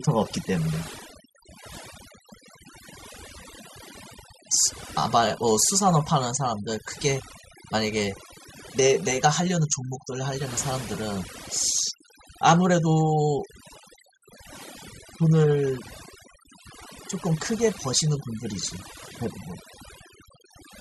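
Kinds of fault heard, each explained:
Overdone noise removal: A noise reduction stage was set too hard on a noisy speech recording and runs through the whole clip. It pulls individual frequency bands down whenever they sit near the estimated noise. Background becomes near silence with twinkling specks. Quieter speech detail is lost too.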